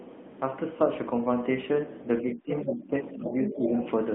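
From start to finish the speech carries the AMR narrowband mobile codec sound. The band runs only from 200 Hz to 3.5 kHz, and the buzzy, synthetic texture fits a mid-rate AMR-NB mode near 10 kbps. A spectrogram shows a hard ceiling at 3.5 kHz and blurred, smeared harmonics.

From 2.21 to 2.94 s the speech sinks, falling by roughly 15 dB at its deepest over about half a second in total. This is speech suppressed in double talk, likely from an echo canceller ducking the talker while the far end was active. The waveform shows a pinched envelope.

The other side's voice leaking through appears as fragments at 2.59 to 2.64 s, 3.25 to 3.56 s and 3.78 to 3.89 s. They sit well below the talker, around 10 to 20 dB down, the middle one loudest. They are likely uncancelled loudspeaker echo and show as weak, separate harmonic traces on the spectrogram.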